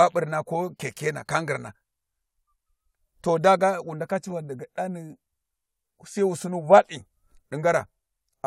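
Listening to this speech recording, nothing technical stood out at any point.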